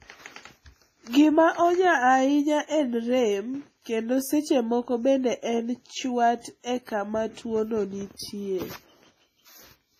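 Throughout the speech, nothing sounds above 15.3 kHz, and the damage of a heavy earlier compression stays audible. This is likely low-bitrate audio saved at a high bitrate: a WMA pass near 24 kbit/s, then a generous MP3 re-encode that cannot restore what was discarded.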